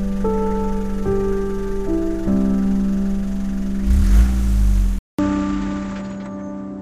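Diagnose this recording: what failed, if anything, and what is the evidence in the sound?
At 4.99 s there's a 200 ms gap, then everything above 7.9 kHz is gone, the level shifts a few dB and a faint new noise floor appears. That's likely the input switched to a poorer device at the driver level, narrowing the band.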